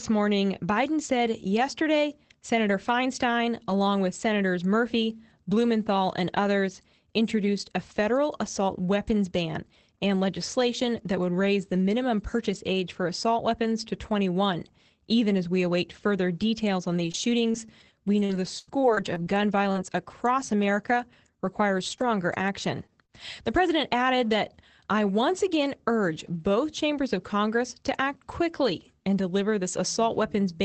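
Right after "await further details on", from 16.97 to 19.76 s, repeated packet loss gives choppy, robotic speech: twelve holes, the longest 84 ms, patched with stretched sound, visible as smeared, repeated spectrogram slices.

Short concealed packet loss follows at 21.98 to 22.09 s, 22.86 to 22.92 s and 23.05 to 23.10 s. Each is a brief smear or wobble where the decoder extended the previous sound, showing as a blurred sliver in the spectrogram.

A lost packet rebuilt from error correction occurs at 22.00 s and again at 22.38 s. Each 20 ms stretch was replaced by a low-bitrate copy, so there is no gap, only a rougher, noisier frame with grainier texture in the spectrogram.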